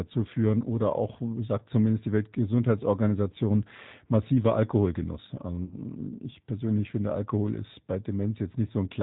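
Speech coded throughout with the G.729 codec: nothing above 4 kHz survives, and the voice sounds plainly rough and synthetic, which fits an 8 kbit/s G.729 link. From 5.65 to 5.76 s, just before "ich persönlich finde", VoIP packet loss concealed by the speech codec turns about 60 ms of missing audio into a fading extrapolation, which points to two lost packets.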